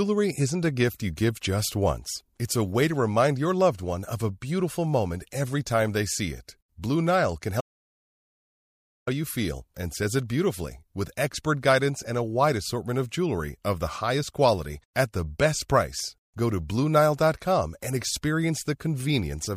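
A speech clip with one audio dropout to silence. The sound cuts off abruptly at 7.61 s and returns at 9.07 s, mid-flow, on "you feel and says". The gap lasts about 1.46 s. It is silent, with no room tone underneath. Whatever was spoken in that span is lost. The likely cause is a brief loss of the input signal, such as a disconnected device or a failed link, while recording continued and wrote silence.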